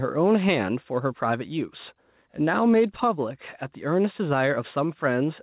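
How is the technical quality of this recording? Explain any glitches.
The recording has one fault, gain pumping, present throughout. The gain ducks each time the speech gets loud, with a level swing of roughly 5 dB. The likely cause is excessive input gain driving a fast limiter that clamps each peak and then releases. This squashes loud and soft passages together. Separately, the telephone-band limit, with nothing above 4 kHz, fits a G.711 call path.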